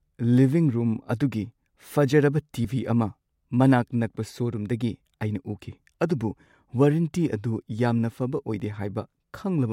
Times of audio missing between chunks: 8.60

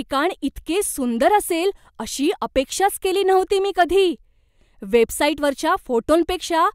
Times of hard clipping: 3.80-3.82

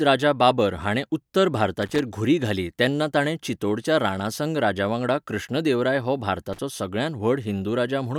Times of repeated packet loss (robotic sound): none

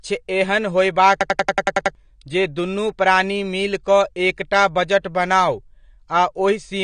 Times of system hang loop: 1.21-1.95

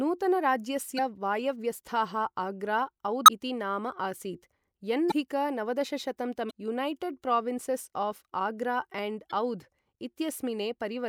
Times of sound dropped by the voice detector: none

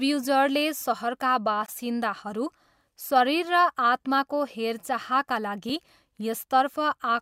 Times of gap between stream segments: 1.66-1.68, 5.69

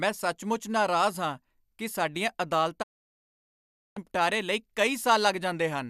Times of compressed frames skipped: none

